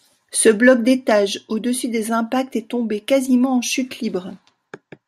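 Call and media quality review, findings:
No audible faults found in this speech clip.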